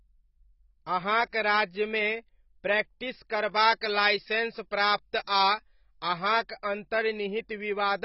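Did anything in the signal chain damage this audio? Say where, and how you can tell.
Yes. Heavy AAC compression runs throughout the speech. Nothing survives above 5.6 kHz, and the band below is dull and smeared. The likely cause is an AAC-LC encode at a very low rate, which fits about 16 kbps, where the codec starves the spectrum of bits.

Pre-emphasis left on affects 3.53 to 6.08 s, where the speech turns thin, bright and sibilant. The treble lift follows an FM 75 µs curve, rising to about 14 dB at 10 kHz against 1 kHz, because the matching de-emphasis cut was never applied during that stretch.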